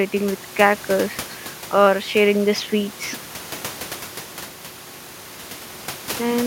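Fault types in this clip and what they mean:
No system faults are audible; the only background is the room's own noise, sitting about 15 dB below the speech.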